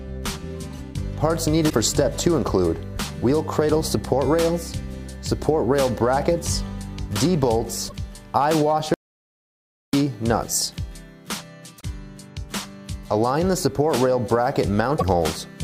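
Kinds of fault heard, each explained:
Damaged data in a compressed stream: Stretches of the encoded stream were corrupted, so the decoder could not make sense of those frames, lost its place and had to search for the next valid frame header before it could continue. Each time this leaves a brief chirp, squawk, click or short hole of about 70 ms, at 1.66–1.73 s, 7.85–7.92 s, 11.77–11.84 s and 14.96–15.03 s, breaking into the sound before normal playback resumes.
Audio dropout to silence: The input signal was most likely lost for a moment, through a dropped connection or a brief mute, while the recording went on writing silence. From 8.94 s to 9.93 s, nearly a full second, the sound cuts off abruptly into dead silence with no background or room tone at all, then comes back in mid-flow. Whatever happened during that second is gone from the recording.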